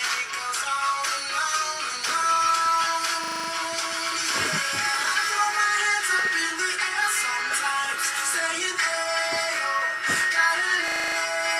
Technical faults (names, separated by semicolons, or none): system hang loop